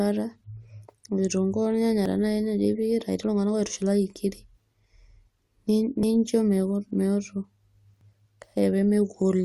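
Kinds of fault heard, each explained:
Overlap between stream segments: where two consecutive 2-second segments claim the same stretch of time, the player discards the shared portion even though that sound was never actually duplicated, so a few milliseconds of real speech vanish and the waveform jumps. It is audible as brief clicks or skips at 2.06 s, just after "kitunkuu ornyanya", at 6.03 s and at 8.01 s. The first two drop about 6 ms each and the last about 18 ms, all on segment boundaries.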